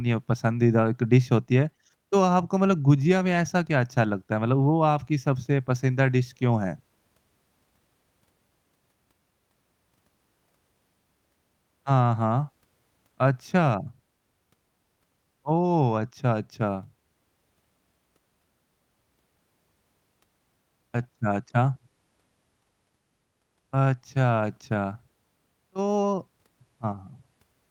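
The speech recording has no audible technical faults anywhere in the clip.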